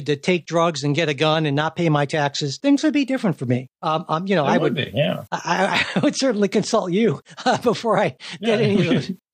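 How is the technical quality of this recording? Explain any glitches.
No technical glitches are audible.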